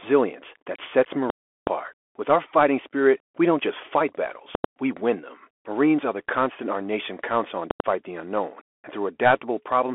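Narrowband speech runs the whole length, with everything above 3.8 kHz missing and the usable band confined to roughly 300 to 3400 Hz. The s sounds come through scratchy, loud high-frequency syllables break up into a gritty distortion, and a fine granular hiss sits beneath the talker. That is the Bluetooth CVSD headset codec, whose plainly audible damage fits a 64 kbps one-bit stream. Each sample only steps up or down by an adaptive amount, so fast, loud high content outruns the step size and turns coarse. The second problem is invalid numbers at full scale, in three places. Just after "that sets", from 1.30 to 1.67 s, a very loud pop is followed by about 372 ms of nothing and then a second pop, which fits a 16384-sample block. Between "we don't just fight" and "we win them" (4.55 to 4.64 s), and between "our nation counts on" and "the unknown and" (7.71 to 7.80 s), a single bang is heard over about 93 ms, matching a 4096-sample block. 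In each case a calculation produced infinite or invalid values that were clamped to the largest positive or negative value, so the output jumps to one extreme level far beyond the speech peaks and holds there for the whole block. Because a held DC level makes no sound, only the jumps in and out are heard.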